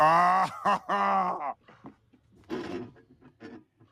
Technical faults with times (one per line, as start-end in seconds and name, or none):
none